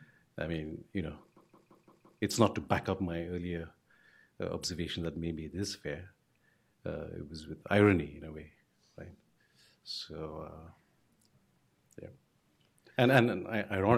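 A system hang loop hits from 1.37 to 2.22 s: a 171 ms slice of audio repeats five times, a machine-gun stutter at about 5.9 Hz. The hardware kept replaying its ring buffer, fitting an 8192-sample buffer, and about a second of audio is lost.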